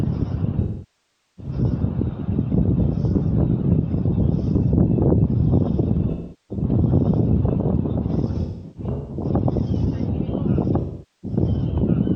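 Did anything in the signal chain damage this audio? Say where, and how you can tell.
Yes. A doubled audio track runs through the whole clip: the full-band sound repeats roughly one and a half seconds later, at about the same level, with no decay or room colour on the copy. A reverb or acoustic echo would be darker and would fade. This identical, undamped repeat points to the signal being likely captured twice along two routing paths of different latency, or to an edit holding two out-of-step copies.

AAC frame loss with concealment, a codec and transport fault, appears at 0.61–1.52 s, 6.10–6.64 s, 8.41–9.24 s and 10.80–11.38 s. The first stretch is the longest, with about 0.77 s missing, so the concealed sound sags toward silence before fading back. In the 8.41–9.24 s stretch the gaps are scattered, and the longest run is around 200 ms. These shorter losses sound smeared and phasey, because the decoder rebuilt them from the last good spectrum instead of from real data.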